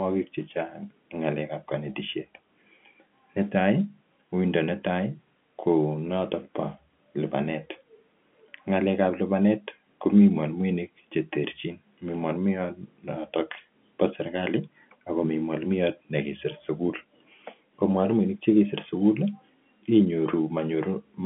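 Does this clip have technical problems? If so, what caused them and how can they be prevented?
No, this clip has no technical problems.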